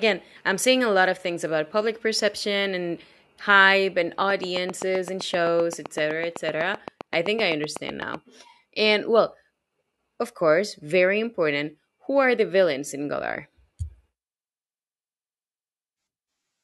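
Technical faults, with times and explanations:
4.30 to 8.15 s, train of clicks: Right after "perception and hype and", about thirty near-identical clicks tick at a steady 7.8 per second. They peak about 10 dB above the speech and carry through pauses. Likely cause: external interference or a faulty connection or power supply.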